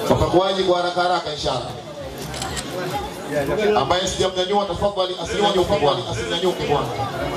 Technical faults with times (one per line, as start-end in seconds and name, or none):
5.34-7.37 doubled audio track